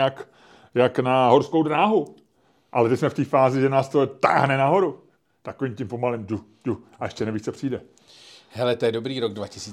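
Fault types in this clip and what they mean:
Nothing stood out on listening to this speech recording.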